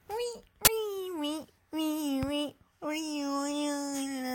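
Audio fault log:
0.65–0.67 s, uninitialised buffer: a single block of roughly 23 ms plays back as a short, very loud burst of digital noise that cuts abruptly in and out of the surrounding audio. The playback path read a buffer before any audio had been written into it, so whatever values were left over in memory were output as samples. The burst length fits one 1024-sample buffer.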